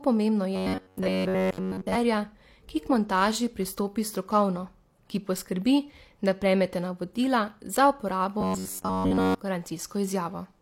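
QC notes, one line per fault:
throughout, transcoding between lossy codecs: the audio was likely encoded as MP3 at 96 kbit/s and then re-encoded as HE-AAC at 32 kbit/s. The second encoder wastes scarce bits on the first one's artefacts and adds its own, so both sets of smearing are heard together, with nothing above 16.3 kHz.
0.56–1.95 s and 8.41–9.40 s, robotic sound from repeated short buffers: new audio likely arrived too seldom, so the player looped its last block, which fits a buffer of about 10.7 ms. This forces a rigid metallic buzz at 93.8 Hz. Most of the first run is repeated material, and the second is entirely repeats.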